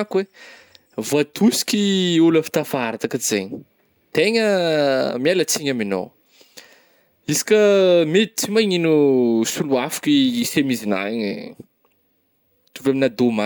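No technical faults can be heard anywhere in the speech.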